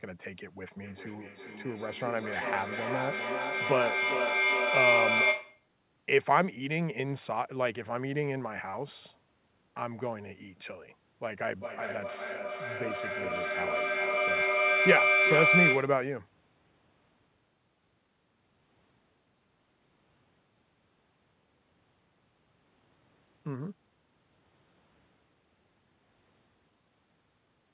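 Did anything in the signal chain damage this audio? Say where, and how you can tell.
Yes. Feedback echo between two devices runs from 0.81 to 5.69 s, in call processing. Speech returns about every 0.4 s, thinner and ringier each pass, and peaks about 2 dB above the speech. A second device replays this microphone's audio. This microphone captures it again, and its echo canceller cannot remove sound its own device never played.

A feedback howl builds from 11.5 to 16.1 s. It narrows to a tone near 2 kHz, inside the call path's 4 kHz band. Its loop repeats about every 0.4 s, and it peaks about 4 dB above the speech. The same loop now gains level on each trip, so the repeats grow instead of fading.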